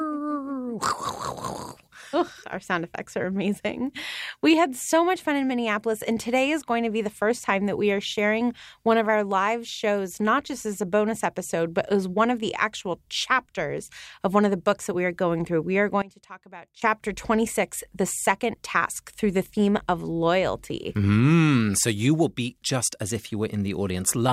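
It's a speech clip, and from 16.02 to 16.82 s the sound suddenly drops by about 20 dB. The likely cause is one channel inverted: with one side's polarity flipped, whatever both channels share cancels in the mono sum, leaving only their small difference.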